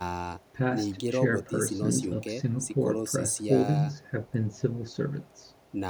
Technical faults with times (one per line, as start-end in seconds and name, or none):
none